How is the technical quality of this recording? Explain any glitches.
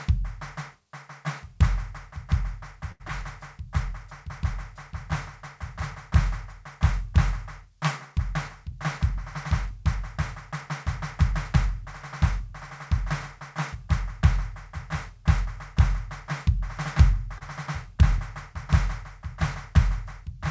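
The music has come through a call path, with nothing above 8 kHz, which fits a G.722 wideband codec, and it carries four glitches.

Short stalls from a late packet, at 2.92 to 3.02 s and 17.38 to 17.43 s: a packet showed up late, the jitter buffer ran dry, and the receiver held the last sound for 79 ms and then 28 ms before resuming. Nothing's lost, but you hear a brief hang with a faint buzz or dip.

Short concealed packet loss at 3.08 to 3.11 s: about 20 ms never arrived, so the receiver continued the previous sound to fill it and blended back in. It comes across as a tiny smear or wobble right after that first stall.

Jitter buffer speed-up from 8.72 to 13.76 s: the buffer had built up extra audio, so the receiver trimmed tiny pitch-period slices over and over, a bit under a tenth of a second in total. Playback runs at 101% with unchanged pitch, so the tempo pushes ever so slightly ahead.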